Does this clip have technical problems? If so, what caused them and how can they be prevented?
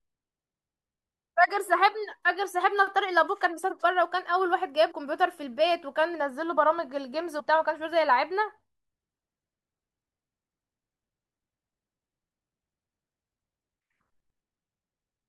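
Yes. Compressed frames skipped: whole 23.2 ms codec frames were missing from the file or rejected by the decoder as damaged, so the speech jumps forward. The jumps are about 50 ms at 3.69 s and about 100 ms at 4.90–4.92 s, 6.13 s and 7.39–7.41 s, and each join sounds like a brief smeared blip. Storing and transferring the file over an error-checked path, with an integrity check before decoding, would prevent these gaps.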